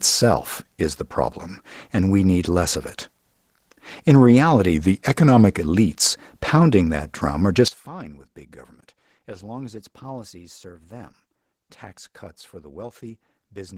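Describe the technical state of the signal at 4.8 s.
At 4.8 s the speech sits inside a drift correction step from 4.74 to 5.60 s: playback slows about 6%, dropping pitch roughly a semitone, likely a clock-matching resampler retuning its buffer. Unlike wow, the offset holds steady and then snaps back. Opus voice compression at 16 kbps in hybrid mode also runs through this moment, giving a hoarse, slightly robotic grain from coarse excitation coding rather than a simple dull low-pass.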